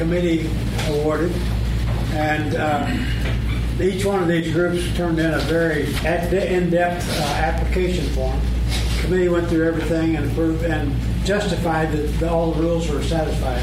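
From 0.25 s to 13.62 s, word clock ticks recur roughly every 0.4 s: an unlocked receiver clock, around 50 ppm off, slips single samples, giving sharp, uneven clicks.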